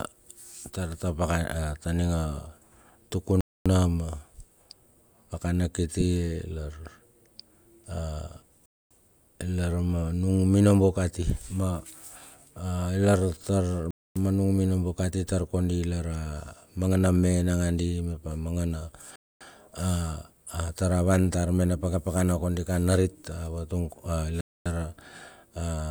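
Gaps between chunks at 3.41, 8.66, 13.91, 19.16 and 24.41 s: the speech arrives in 5-second chunks, and 250 ms of silence is inserted at each join.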